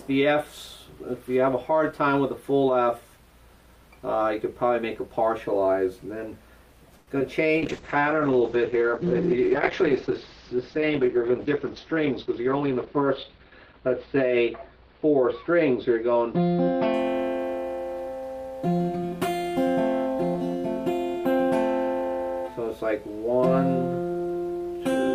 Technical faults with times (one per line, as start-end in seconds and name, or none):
6.97-7.09 short stall from a late packet
7.19-7.22 short concealed packet loss
7.57-17.50 call bitrate drop
11.85-13.30 jitter buffer speed-up